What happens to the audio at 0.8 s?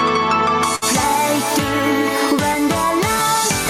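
A burst of packet loss runs from 0.75 to 0.84 s. The last sound is stretched and faded for about 62 ms, then playback resumes about 60 ms further on. Unlike a plain dropout, the gap is filled rather than silent.

Gain pumping also runs through this moment. The gain swells in the gaps and ducks by about 10 dB under loud sounds, likely from a fast limiter working against excessive gain. Unlike a noise gate, it raises the background in the gaps instead of cutting it.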